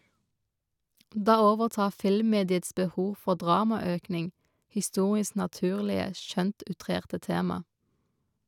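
No technical faults can be heard anywhere in the recording.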